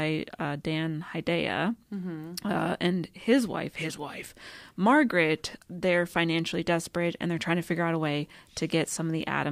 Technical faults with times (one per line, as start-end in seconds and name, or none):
none